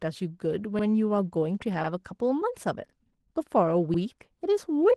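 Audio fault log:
Throughout, Opus voice compression: the speech sounds plainly coded, a touch hoarse and muffled, with a slightly robotic edge. At around 16 kbps Opus runs in its hybrid mode, so SILK models the low band by linear prediction while a thin CELT layer covers the top, and neither has many bits to spare. The excitation gets coarsely coded, so the voice loses its natural grain even though the band still reaches fullband.
0.79 s, 1.84 s, 2.89 s, 3.94 s, overlapping chunks: at each of these four points there's a little stutter where about 50 ms of audio plays twice. They land almost exactly a second apart, which suggests the audio was handled in 1-second chunks with each new chunk starting slightly before the previous one finished. The repeated piece gets spliced straight in at the join, so you hear a small hiccup or click at each seam.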